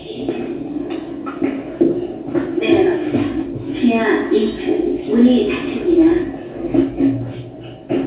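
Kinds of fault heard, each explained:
No faults are heard.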